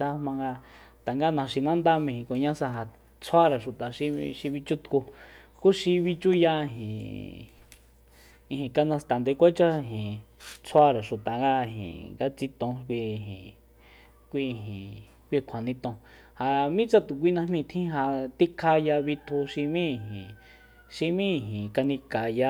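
No technical faults can be heard anywhere in the recording. There is nothing in the audio that calls for a note on the signal path.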